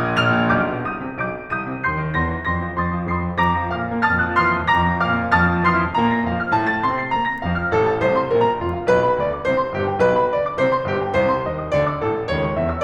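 A short piece of music, and nothing technically wrong turns up anywhere in it.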